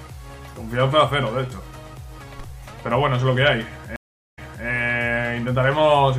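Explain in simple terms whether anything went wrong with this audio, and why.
At 3.96 s the sound cuts out for about 0.41 s. This is a stream reconnect: the connection dropped, the player went quiet, then rejoined the stream and started decoding afresh. When the sound returns, it picks up about 0.29 s earlier than where it stopped, so a short stretch is heard twice. That suggests the server resent a recent chunk on reconnecting. The disturbance is over by 4.66 s.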